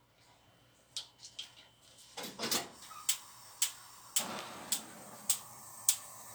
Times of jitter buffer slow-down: none

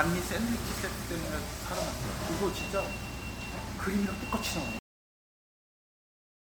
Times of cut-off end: 4.79-6.49

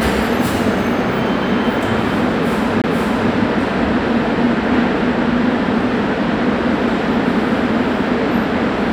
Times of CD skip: 2.82-2.84

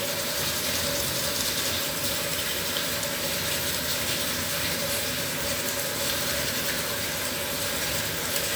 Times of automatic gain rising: none

